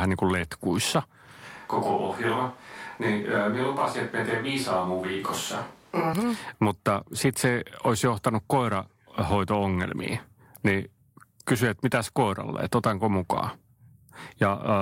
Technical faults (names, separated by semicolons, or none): switch to a distant microphone